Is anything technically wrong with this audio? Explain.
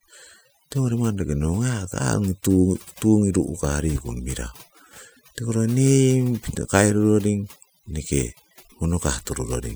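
Yes. Overdone noise removal affects the whole speech clip, from start to finish. A noise reduction process was pushed too hard on a noisy recording. It pulls individual frequency bands far down, or shuts them off, whenever they sit close to its idea of the noise. The quieter parts of the speech fall below that line and vanish too. Between phrases the background drops and breaks up into twinkling, warbling specks.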